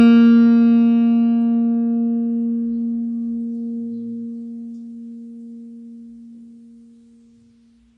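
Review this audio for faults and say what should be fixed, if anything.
The music carries plainly audible WMA compression from start to finish: a washy, ringing smear around transients and a hiss that swells and recedes with the signal, while quieter detail drops out. This is likely a transform codec running long blocks, so quantisation noise spreads over tens of milliseconds and weak spectral lines are zeroed. The damage fits an early WMA encoder at a low bitrate of around 32 kbps. To prevent it, keep a lossless or high-bitrate master and re-export from that rather than from this compressed copy.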